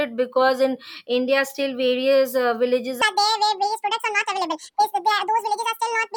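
From 3.02 s right through to the end, there's a section at the wrong speed. The speech jumps to about 1.73 times its normal rate, so it sounds rushed and chipmunky, with pitch raised by roughly ten semitones. Because speed and pitch shift together, it's most likely playback or an edit running on the wrong clock rather than a deliberate pitch effect. The change is abrupt at 3.02 s and holds steady until the clip ends.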